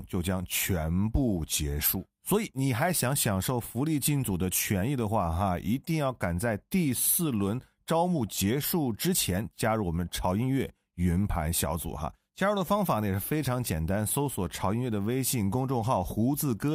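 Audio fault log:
No audible faults were found in this speech clip.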